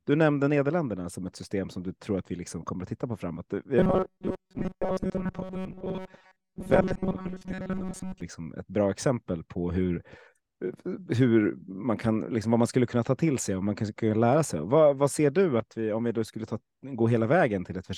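Robotic sound from repeated short buffers runs from 3.79 to 8.21 s, ending just before "liksom ett bra exempel". The speech turns into a rigid, metallic buzz fixed at 188 Hz that only loosely tracks the words. That pitch points to a segment of about 5.3 ms being replayed over and over. The likely cause is fresh audio arriving too rarely, so the playback repeats its last short slice and skips most of the real signal.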